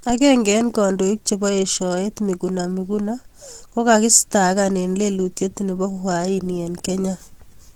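From start to finish the speech sounds hoarse and muffled, with a grainy, rough texture on the voiced parts and a noisy fizz where fine detail should be, while the top end still reaches about 20.2 kHz. This is likely Opus compression in its hybrid mode, which codes the lower band as speech and fills the upper bands from coarse energy, and the plainly audible damage fits a bitrate around 16 kbps.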